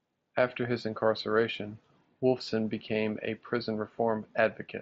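No technical faults occur in this speech; it comes through a Bluetooth mSBC headset link, which leaves nothing above about 7.7 kHz.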